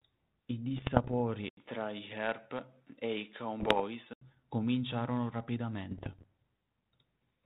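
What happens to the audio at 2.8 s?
At 2.8 s the sound is dull and boxy, likely from an input switched to a poorer device (1.49–4.21 s). A spectrogram shows nothing above 4.3 kHz, and the waveform has an 80 ms gap at the switch.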